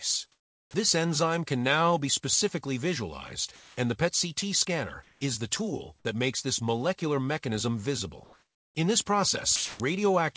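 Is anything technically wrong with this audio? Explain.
Yes, there are three related faults, all tied to a voice detector gating the transmission.

Comfort noise in place of the background appears at 0.32–0.74 s, 5.03–5.21 s, 8.24–8.75 s and 9.56–9.80 s. In the pauses the sender likely stopped transmitting, and the receiver filled the gaps with synthetic noise roughly matched to the background. The real ambience gives way to a flat, featureless hiss. The level jumps by about 9 dB in the first gap, about 2 dB at 8.24 s, about 4 dB at 9.56 s, and barely at all at 5.03 s.

Sound dropped by the voice detector occurs at 3.56–3.77 s. The detector likely treated genuine, quieter sound as background and halted transmission, so about 140 ms of real material is missing. Steady noise stands in for it over roughly 210 ms before the sound returns when the detector triggers again.

An onset clipped by the voice detector falls at 9.78–9.80 s, just as the last comfort-noise gap ends. 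The detector was likely slow to register that sound had resumed, so about 20 ms of its beginning was never sent. The sound therefore starts abruptly, without its soft attack. Throughout, the call codec's band limit means nothing is heard above 8 kHz.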